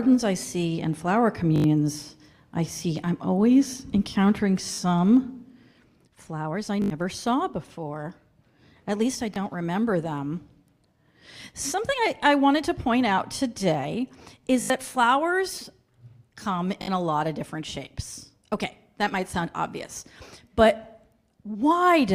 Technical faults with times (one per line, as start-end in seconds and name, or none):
1.56-1.64 repeated buffer
4.74-4.78 repeated buffer
6.82-6.90 repeated buffer
9.34 repeated buffer
14.62-14.70 repeated buffer
16.82-16.88 repeated buffer